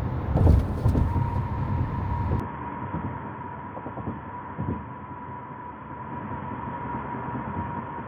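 At 2.40 s the sound abruptly turns dull and boxy, and it stays that way to the end. There is no gap at the change. Nothing is heard above 3.4 kHz from that point. The level drops by about 10 dB. A new background noise appears, roughly 40 dB below the sound. This is most likely an input switched to a poorer device. The system appears to have moved to a narrower-band microphone or a headset's call profile mid-recording.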